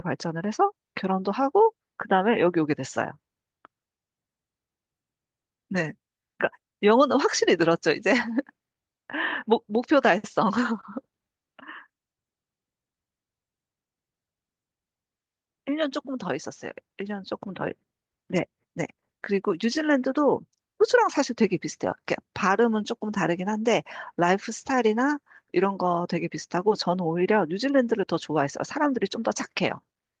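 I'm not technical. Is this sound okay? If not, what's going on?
Yes, nothing in this speech recording points to a technical problem.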